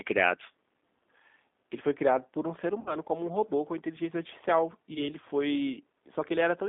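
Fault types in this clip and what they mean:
G.729 codec: an 8 kbit/s speech codec that rebuilds the voice from a vocal tract filter, pitch predictor and sparse pulses. Here the speech sounds plainly rough and synthetic, and a spectrogram shows energy confined to about 200 Hz to 3.6 kHz with smeared, grainy harmonics.
VoIP packet loss concealed by the speech codec: lost audio was filled in by extrapolating the last pitch and filter at falling gain. Near 2.8 to 2.96 s about 60 ms go missing, and near 4.94 to 5.09 s about 20 ms, each heard as a stretched, fading stretch with repeated, flattened harmonics on a spectrogram.
Echo leak: from about 3.26 to 3.5 s a faint, delayed copy of the voice, roughly 400 ms behind and well below the speech, likely leaking past a far-end echo canceller. It appears as a weak duplicate of earlier harmonic patterns.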